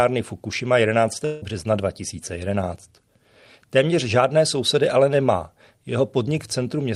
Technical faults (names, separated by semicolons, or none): long network dropout